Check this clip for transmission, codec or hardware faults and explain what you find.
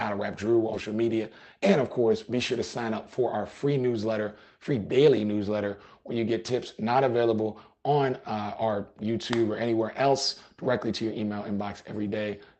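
Two transmission faults occur close together near the start.

At 0.73 s there is a skip ahead: playback jumps forward with no filler, and roughly 0.4 s of sound is missing. A stretch of audio was discarded while later audio was already queued, so the two sides of the gap are spliced almost directly. The result is an abrupt discontinuity, with the sound after the cut arriving sooner than expected and the overall delay shortened by about the same amount.

From 0.85 s to 1.62 s comes a jitter buffer speed-up. Having accumulated more audio than its target, the buffer shortened its backlog by repeatedly cutting out short pieces of one or a few pitch periods, removing around 70 ms in total. Playback runs at 108% speed while the pitch stays the same, so this section sounds slightly hurried and compressed in time before settling back to normal pace.

The audio also shows the band limit of a WebRTC call path, with content stopping at 8 kHz and the usual coding noise of Opus at about 24 kbps.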